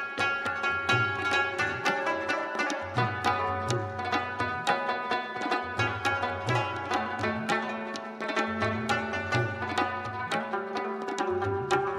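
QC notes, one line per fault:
No faults found in this clip. Nothing needs flagging on this pass.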